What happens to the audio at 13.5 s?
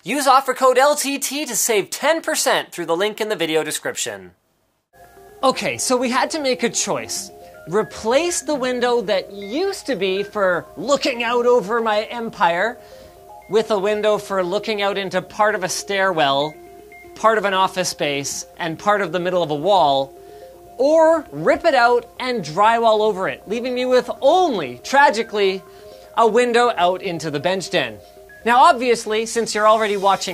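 Nothing goes wrong at 13.5 s; the audio plays through that moment intact, with no dropout, click or distortion.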